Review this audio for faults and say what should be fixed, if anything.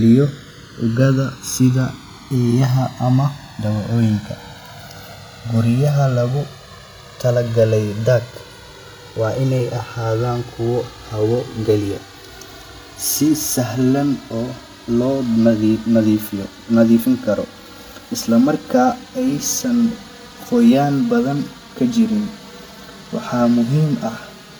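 Channels drifting apart runs through the whole speech clip. The two sides run on clocks roughly 200 ppm apart, so their offset grows to around 5 ms. Summed to mono, the comb notches sweep slowly, heard as gradual flanging. Unlike a fixed-offset comb filter, the notches keep moving, and unlike a flanger they travel one way instead of cycling. Prevent it by locking both recording devices to a shared word clock, or by recording both channels through a single interface.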